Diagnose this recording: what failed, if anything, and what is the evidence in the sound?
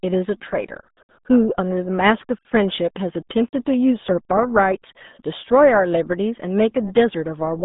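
RealAudio 14.4 codec damage runs through the whole clip, a codec-stage failure. The speech sits in a band from about 150 Hz to 3.7 kHz, with nothing above 3.8 kHz, and sounds heavily muffled and gargly, which fits an 8 kbit/s low-rate coder built for dial-up modems.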